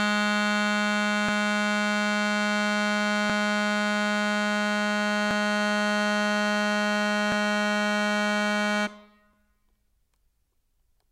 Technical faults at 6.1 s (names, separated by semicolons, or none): none